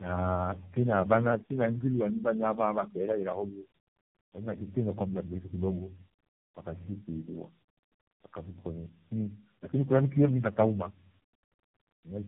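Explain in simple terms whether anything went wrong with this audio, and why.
Yes, throughout the whole clip the speech sounds rough, muffled and warbly, with nothing above about 3.8 kHz. This is tandem speech coding: the call was decoded and re-encoded by several different speech codecs in a row, each worsening the last.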